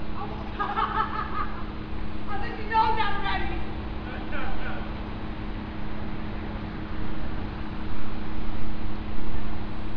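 A recording of everyday sounds, with nothing technically wrong with it.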